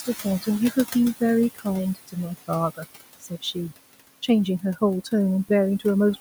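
Speech over room noise sitting about 13 dB below the voice carries noise suppressor artifacts for its whole length: the background is pulled down by about 18 dB between phrases and swells back under them. Unlike a simple noise gate, which opens and shuts cleanly, this works band by band. Speech cut by the noise suppressor occurs at 0.00–0.47 s (dips up to about 11 dB), 1.55–1.66 s (about 19 dB), 1.95–2.16 s (about 16 dB) and 3.20–3.56 s (about 18 dB). Soft speech is mistaken for noise and turned down with it, so syllables sound swallowed rather than dropping to digital silence as in a packet dropout.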